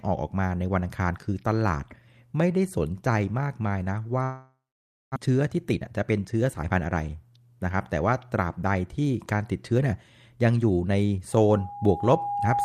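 Long network dropout, 4.23 to 5.18 s, in this speech recording: the sound stalls, and the last fragment is stretched into a fading buzz before giving way to about 550 ms of silence. Roughly 600 ms of audio never returns, most likely because packets stopped arriving. Jitter buffer speed-up, 5.25 to 6.97 s: the receiver, holding a backlog a few hundred milliseconds too deep, trims repeated pitch-period slices, about 300 ms in total. The speech plays at roughly 116 percent of its normal rate at unchanged pitch and sounds hurried. Loudspeaker feedback squeal, 11.32 s to the end: an 817 Hz tone swells over about a second and a half until it is about as loud as the speech. The microphone is picking up its own loudspeaker, and the loop gain exceeds one at that frequency.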